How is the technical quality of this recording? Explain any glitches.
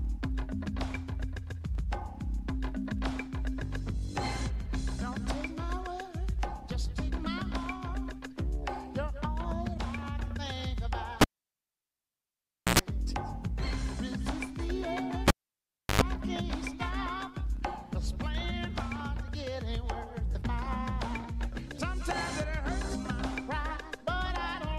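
The recording has two cable pulled and plugged in faults. At 11.21 to 12.79 s, and again at 15.28 to 16.02 s, the live lead is unplugged and reinserted: a pop, near silence for about 1.5 s, then 0.7 s, a short 0.1 s burst of 60 Hz, then 50 Hz mains buzz as only the tip connects, and a second pop as sound returns.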